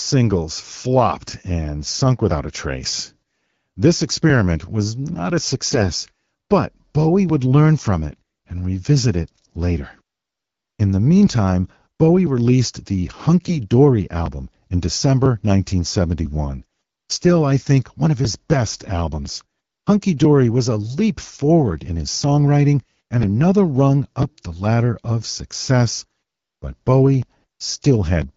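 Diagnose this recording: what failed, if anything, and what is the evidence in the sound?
The driver or buffer stage shows periodic USB or driver dropouts. From 0.31 s to 28.22 s a tick falls roughly once a second, at a steady 0.996 s spacing. That is about thirty events in all, heard only where there is signal. Each one is a skip of around 4 ms, not a silence. A background task is stalling the USB bus or audio driver on a fixed schedule, and the samples that arrive in that gap are simply discarded.

AMR bit errors come from the network link feeding the decoder. Short hoarse, gargly bursts occur at 5.71–5.87 s, 13.45–13.61 s, 16.58–16.81 s and 23.18–23.26 s. Pitch and level hold roughly steady, but the texture turns scratchy. A weak radio link flipped a few percent of the poorly protected bits, while the checksum on the core bits still passed. Pulse positions, fine pitch, gain and spectral values decode wrongly. 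Between bursts the AMR wideband (HD Voice) codec at 12.65 kbit/s carries clear, band-limited sound.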